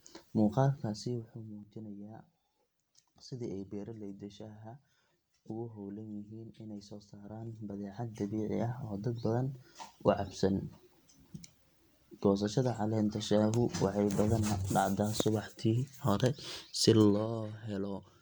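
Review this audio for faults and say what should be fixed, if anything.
Zipper noise ticks through level moves at 0.73–1.66 s (about 15 dB down), 7.13–8.66 s after "howlan yihiin inay soo" (about 15 dB up), and 16.98–17.41 s after "hore si" (about 10 dB down). The gain jumps in unsmoothed 2 dB steps, each leaving a small click. These moves tick audibly as they go. To prevent it, interpolate gain per sample or ramp each change across the buffer.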